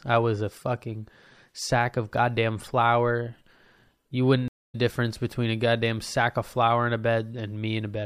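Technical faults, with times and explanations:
4.48–4.75 s, stream reconnect: the speech cuts to silence for about 240 ms, then resumes at "difference between a goddamn" roughly a fifth of a second later than where it stopped, so a short stretch is missing. The link dropped and the player restarted its decoder mid-stream, so the first frame returns faded in. A waveform shows a flat gap, then a ramped onset. A spectrogram shows a clean vertical blank band with nothing decaying into it.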